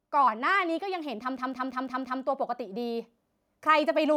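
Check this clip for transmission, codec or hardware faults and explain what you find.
Two faults are present in the speech, one from gain control and one from a stalled playback system.

From 0.1 s to 3.1 s there is automatic gain rising: the gain control judged the input too quiet and raised its gain slowly, by about 5 dB. Speech and background noise swell together, so the whole level creeps upward.

From 1.37 s to 2.22 s a system hang loop occurs. The host or driver froze while the audio hardware kept cycling the same ring buffer. One 0.17 s slice repeats five times at 5.86 Hz, a machine-gun stutter that fits an 8192-sample buffer.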